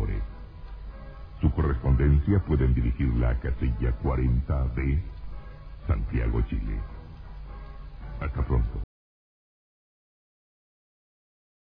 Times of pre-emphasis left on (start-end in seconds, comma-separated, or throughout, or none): none